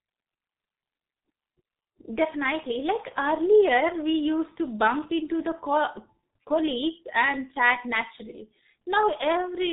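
From start to finish, the speech carries heavy damage from the G.723.1 codec. Nothing is heard above about 3.8 kHz, so the voice sounds dull and boxed in. The codec models the voice in long frames and refreshes that model slowly, which fits a rate near 6 kbit/s. Consonants smear into each other. The tone turns rough and hoarse, as if the speaker were straining through a narrow phone line.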